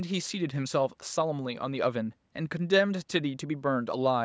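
Nothing's wrong with this bit of speech; it has simply been through a call's microphone processing, so the deepest bass is trimmed away and nothing reaches above 8 kHz, which is just how that path normally sounds.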